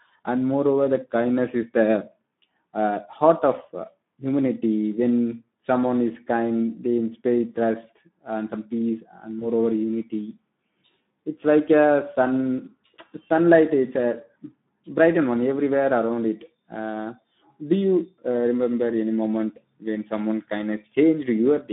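Speex codec, throughout the clip: the low-rate CELP coding has too few bits to model the excitation, so the speech sounds hoarse and grainy, with plainly audible damage that fits a setting near 11 kbps. The band runs only from 150 Hz to 3.7 kHz.

VoIP packet loss concealed by the speech codec, from 9.39 to 9.47 s, just after "and some peace and": the decoder stretched its last pitch and filter across what sounds like a single missing 20 ms packet, which leaves a brief stretched, fading smear. The voice stays weakened until about 9.47 s, as "moreover unity" begins.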